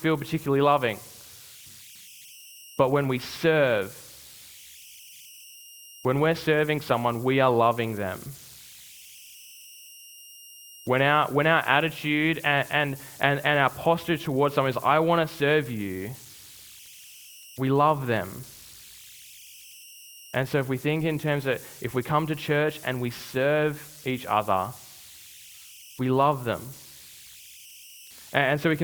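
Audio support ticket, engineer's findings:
Converter idle tones, throughout. Faint whistle around 3 kHz in pauses, grainy noise under quiet speech, about 24 dB below signal. Undithered delta-sigma converter locking into repeating bit patterns at low input; tone pitch set by input offset.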